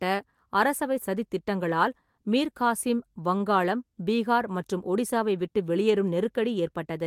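At 3.37 to 3.42 s, just after "சதித் திட்டங்களால் மீர் காசிம்", a short stall from a late packet holds the sound for about 25 ms with a faint buzz or dip. The packet came late rather than being lost, so nothing is skipped and the speech resumes exactly where it stopped, 25 ms later.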